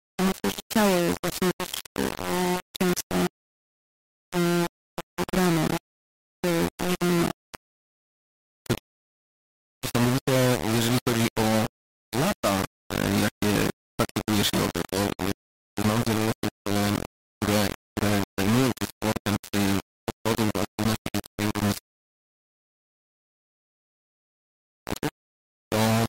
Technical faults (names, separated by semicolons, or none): low bit depth without dither; rebuffering stall